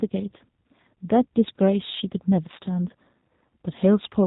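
From start to finish the speech carries G.729 codec damage: nothing above 4 kHz, a rough, slightly synthetic rebuilt quality that fits an 8 kbit/s G.729A stream.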